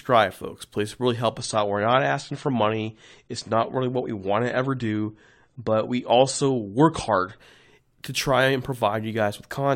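From 1.38 s to 7.38 s the adaptive stream falls back to a lower bitrate, consistent with a switch from about 96 to 32 kbit/s AAC. The speech abruptly loses everything above 9 kHz and gains coding artefacts, with no gap at either switch.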